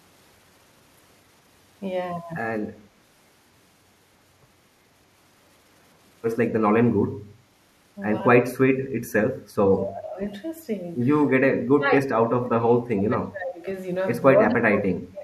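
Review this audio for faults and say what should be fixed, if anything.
The speech drops sharply at 9.83 to 10.19 s, 11.45 to 13.66 s, and 14.34 s to the end. The first dip is around 20 dB. The later two fall much deeper. This is likely speech suppressed in double talk: the echo canceller mistook overlapping far-end sound for echo and attenuated the talker. Tuning the canceller's double-talk detection, or reducing loudspeaker-to-microphone coupling, would prevent it.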